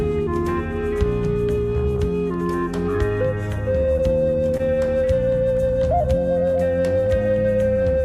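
Twice, at 3.93 to 3.97 s and again at 4.57 to 4.62 s, a late packet let the jitter buffer run dry, causing a short stall. The receiver held the last sound for 27 ms, then 23 ms, before resuming where it left off, so each moment drags slightly with a faint buzz or dip.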